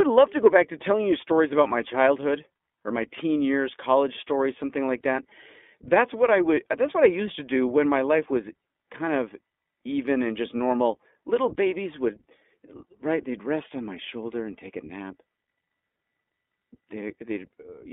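The iLBC codec runs throughout, narrowing the speech to a telephone band of roughly 250 Hz to 3.5 kHz. Each 20 ms frame is coded on its own, which fits the 15.2 kbps mode, leaving the speech plainly audibly a little rough and synthetic.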